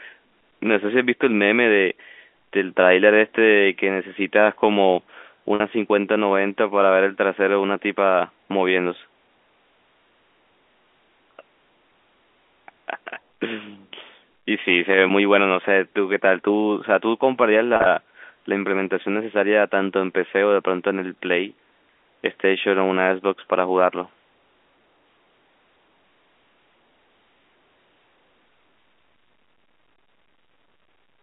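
Packet loss with pitch repetition occurs twice over the narrowband G.711 telephone line. At 5.55 s about 50 ms of audio drops out, and at 17.76 s about 70 ms is lost in pieces across 100 ms. The receiver fills each gap by repeating the last pitch period, so the speech briefly holds on a slightly buzzy tone.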